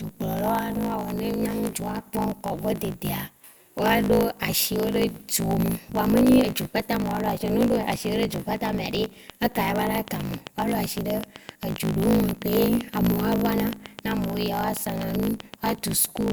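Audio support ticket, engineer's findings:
Block size mismatch (truncated), throughout. Steady buzz at 54.4 Hz under the speech. Speech runs 1.16 times fast at near-normal pitch. The writing stage fills longer blocks than the reading stage takes, and each block's tail is dropped. The write side uses 1024-sample blocks. The speed-up points to a read block about one seventh shorter. Check buffer sizes between those stages.

Train of clicks, 9.04 s to 16.31 s. Regular ticking at 6.64 per second, around fifty clicks in all. Peaks are roughly 10 dB above the speech. Present in pauses too. All clicks have near-identical shape. Likely cause: electrical interference from nearby equipment, or a faulty connection or power supply. Inspect cabling, grounding and interface load over that period.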